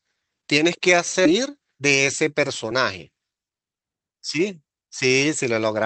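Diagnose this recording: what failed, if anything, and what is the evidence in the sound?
Skip ahead at 1.25 to 1.27 s, in the network and jitter buffer stage: the speech jumps forward with no gap, and roughly 0.7 s of audio is missing. That stretch was discarded while later packets were already queued, so both sides of the cut join almost directly.

Jitter buffer speed-up from 1.49 to 1.81 s (113% speed) and from 2.22 to 4.39 s (108% speed), in the receiver's buffer: the speech sounds hurried at unchanged pitch. Short pitch-period pieces were repeatedly removed, a few hundred milliseconds in all, to drain excess delay.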